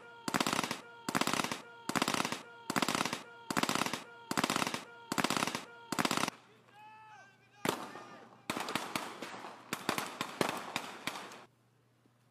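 A broken-record loop runs from the start to 6.29 s, an 0.81 s fragment repeating seven times, likely because playback stalled and resent its last buffer. Damaged data in a compressed stream at 9.29–9.35 s makes the decoder lose frame sync.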